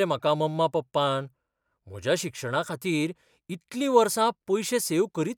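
No dropouts, clicks, distortion or other technical faults turn up anywhere in the recording.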